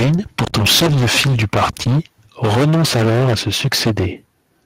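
Speech runs through heavy microphone overload for most of its length. The first stretch spans 0.0 to 2.0 s. The second spans 2.43 to 4.07 s. The peaks are driven about 16 dB and about 15 dB past full scale. Roughly two fifths of the samples sit flat at the limit. The loud syllables sound harsh and crackly, with their tops sheared off. The likely cause is an input volume set too high for the converter. At 3.02 s, inside the second overloaded stretch, there is a microphone volume stepped down. Both the voice and the background drop by about 2 dB in one sudden step. The step comes while the signal is still clipping hard. It points to call software that likely sensed the overload and cut the device's input gain.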